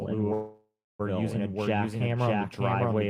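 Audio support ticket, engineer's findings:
Doubled audio track, throughout: full-band second copy at roughly equal level, trailing by about 0.7 s, no reverb tail or room colour. Likely an echo path or an edit mixing two unsynchronised copies. Spectrogram: every speech pattern repeated intact about 0.7 s later. Waveform: overlapping envelopes, with an abrupt start of the copy.

Call audio freeze, 0.33 to 1.01 s: sound stalls, the last fragment stretched into a fading buzz or hiss, then about 0.31 s of silence before speech resumes where it stopped. Nothing lost. 0.66 s gap inserted, shifting everything after it. Likely a jitter buffer running empty on late packets. Spectrogram: smeared, static bands fading to blank. Waveform: decaying tail, then a flat line.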